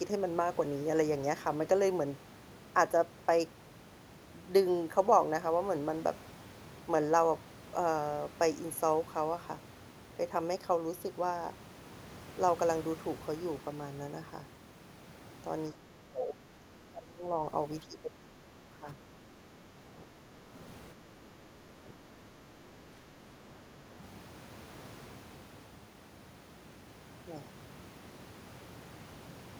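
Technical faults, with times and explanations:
15.73–17.24 s, 17.86–20.56 s, 21.29–23.88 s: speech suppressed in double talk, dipping about 20, 15, then 5 dB, likely an echo canceller turning down overlapping talk. The level sags for seconds.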